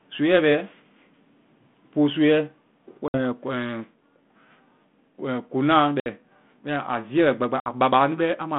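Packet loss on an ADPCM call strikes at 3.08, 6.0 and 7.6 s, each time dropping about 60 ms of audio, a few packets' worth, and filling the gap with silence. The receiving G.726 decoder's predictor and step size then no longer match the sender's, so each hard-edged hole is followed by speech returning slightly distorted, until it resynchronises within tens of milliseconds.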